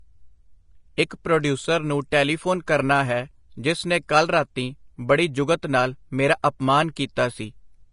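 From start to finish the speech has a hissy, grainy treble, with sibilants smeared into a rough wash and consonant attacks softened. Vowel tones carry a fine roughness, and the top octave sounds dulled, as if cut off early. This plainly audible damage is likely Vorbis compression at a low setting, consistent with a bitrate around 30 kbps: the encoder lowered its cut-off and quantised the upper residue so coarsely that detail turned into noise-like grain.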